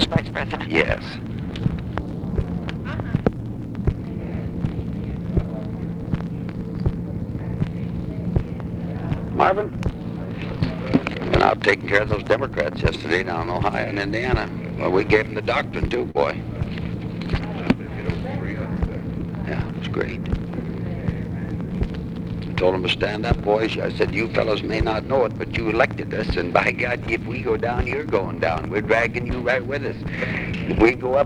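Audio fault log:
Throughout: clock drift between sender and receiver. The sending end's clock runs roughly 2 percent slow, so the receiver's jitter buffer keeps draining and has to be topped up. Unlike network jitter, which comes and goes at random, this pressure is steady and always in the same direction. It produces the repeated corrections listed below, and the sound as a whole drags slightly rather than wobbling.
0.21 to 15.43 s: repeated timing corrections. The receiver keeps repeating short pieces so that it does not run dry, which plays the audio at about 98 percent speed and adds roughly 0.4 s over this stretch. The repeats come at uneven intervals and are too small to stand out, so they come across as slight hiccups or a faintly unsteady tempo. A single dropout would instead be one obvious break.
16.11 to 16.18 s: short stall from a late packet. The buffer ran empty, and the receiver held the last sound for 38 ms until the packet arrived. 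Playback then continued from the same point, with nothing lost and the delay 38 ms longer than before. What tells it apart from packet loss is that nothing is skipped. The sound is briefly held, with a faint buzz or dip, and then resumes where it stopped.
17.24 to 30.99 s: repeated timing corrections. The same slow-sender drift continues here, again at about 98 percent speed, and the repeated slivers add roughly 0.3 s. Each edit is tiny and spaced irregularly, so this run has the same mild, uneven hesitancy as the first. It lacks the single held sound of the stall, and the gaps and clicks of real data loss are absent.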